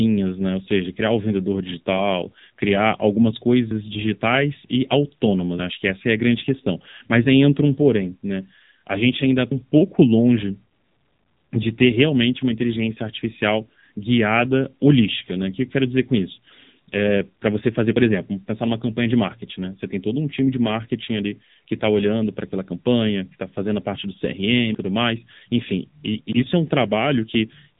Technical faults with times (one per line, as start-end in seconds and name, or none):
0.00-27.79 AMR narrowband mobile codec